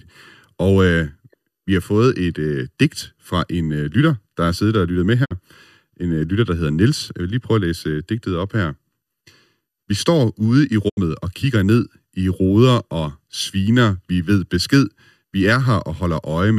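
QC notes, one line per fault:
Throughout: channel delay (comb filtering). One channel runs late by roughly 0.7 ms, so the mono sum notches out around 700 Hz and up, leaving the speech hollow and phasey.
5.24 to 5.33 s and 10.88 to 10.99 s: digital broadcast dropout. After "siddet og lyttet med" and "står ude i", the receiver mutes with a quick 20 ms fade, losing about 48 ms, then 72 ms, before "og kigger ned i".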